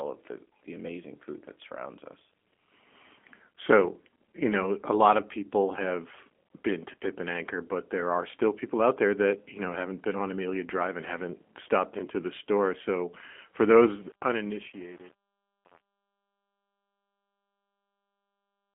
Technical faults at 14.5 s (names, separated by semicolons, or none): G.729 codec; truncation distortion on a fade